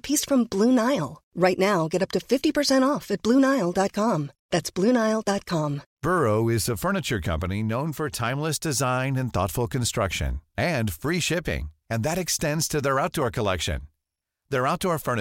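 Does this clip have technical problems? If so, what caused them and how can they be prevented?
No, nothing in this speech recording stood out as a technical problem on listening, so there is no cause to trace or prevent.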